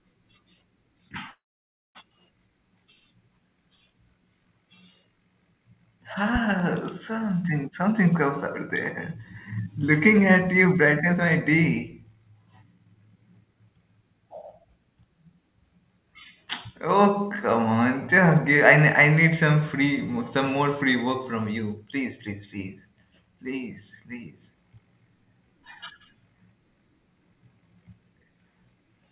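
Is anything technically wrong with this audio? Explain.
Yes, there are three kinds of fault in this speech recording, which passes through a narrowband call path with no content above 4 kHz, consistent with G.711 mu-law.

Call audio freeze, 1.30 to 1.97 s: the last sound is extended as a brief fading buzz, then about 0.56 s of silence, and the speech resumes where it stopped. The likely cause is delayed packets draining the jitter buffer, which inserted a gap of about 0.65 s without losing any speech.

Loud pop, 6.36 to 6.63 s: two sharp pops, about 5 dB above the speech level, sit on top of the talking, which continues underneath. This is likely a voltage step or pulse from a plug, switch, static discharge or driver glitch, briefly shaped by the downstream circuitry.

Jitter buffer speed-up, 7.72 to 8.21 s at 122%, 9.14 to 11.21 s at 116%, and 12.09 to 13.82 s at 112%: the speech sounds hurried, but its pitch is unchanged. 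The receiver trimmed repeated pitch-period-length pieces to shrink an overfilled buffer, removing roughly 0.1 s, 0.3 s and 0.2 s respectively.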